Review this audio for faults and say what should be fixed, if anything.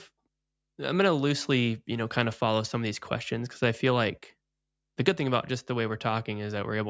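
No faults turn up in this audio, so nothing needs to be fixed.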